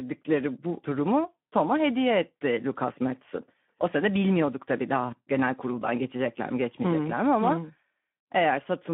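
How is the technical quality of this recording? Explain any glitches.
Quality is poor throughout, with one fault. Speex codec: a low-bitrate CELP setting, which fits roughly 11 kbps within a 150 Hz to 3.5 kHz line band, starves the excitation, making speech audibly hoarse, noisy and muffled.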